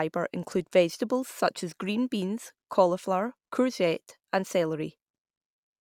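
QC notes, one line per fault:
Nothing to flag on this speech clip; there's no fault to log.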